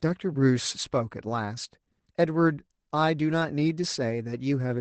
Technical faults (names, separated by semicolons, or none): Opus voice compression